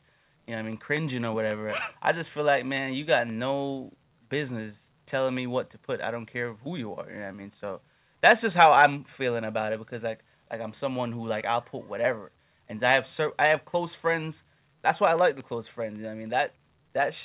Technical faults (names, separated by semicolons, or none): microphone overload; microphone volume stepped down